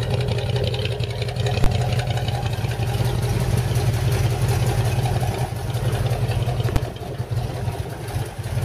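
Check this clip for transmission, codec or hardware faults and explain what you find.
Two faults of one kind, invalid numbers at full scale, appear at 1.64 s and 6.76 s. Each time a calculation produced infinite or invalid values that were forced to the largest positive or negative value. The blocks last about 20 ms and 5 ms, so each is heard as one sharp bang.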